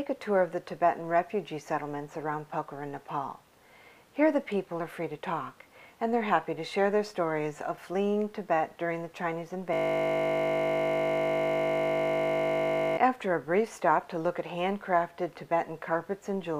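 At 9.73 s the audio locks into a system hang loop that lasts until 12.97 s. The playback system stalled while the sound hardware kept cycling the same 20 ms of its ring buffer, so that one fragment repeats exactly, about 160 times. Because the loop is so short, it comes across not as a stutter but as a steady, flat buzz at 50 Hz. The original material is cut off until playback resumes.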